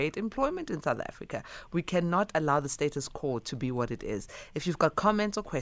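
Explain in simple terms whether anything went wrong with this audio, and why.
Nothing went wrong here; the speech comes across steady and intact, with no glitches, dropouts or odd sounds anywhere along the way.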